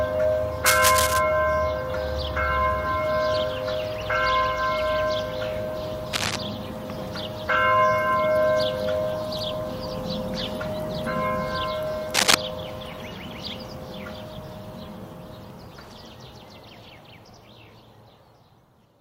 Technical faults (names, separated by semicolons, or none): cable scratch noise